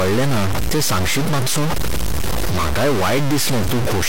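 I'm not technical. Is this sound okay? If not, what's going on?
No. The speech has a distorted roughness from start to finish. The likely cause is a stuck bit, one digit in the digital signal jammed at a fixed value. Unlike clipping, which roughens only the loudest moments, this noise sits on the quiet parts too.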